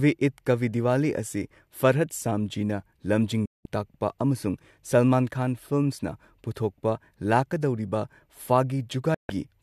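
A digital broadcast dropout hits twice: the receiver lost valid frames and muted until good ones returned. After "ꯁꯥꯝꯖꯤꯅ ꯂꯝꯖꯤꯡ", speech snaps to silence through a 3 ms fade from 3.46 to 3.66 s, losing 192 ms. Again, 9.14 to 9.30 s drops 144 ms.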